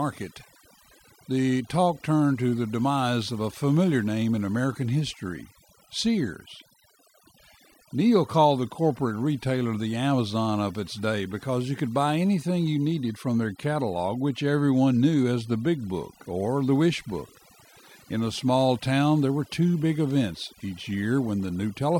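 Right from the start and all the way through, there's overdone noise removal on this speech. The reduction was pushed too hard, so bands near the noise floor get pulled right down, taking the softer parts of the voice along. You hear near-silent gaps with twinkly specks.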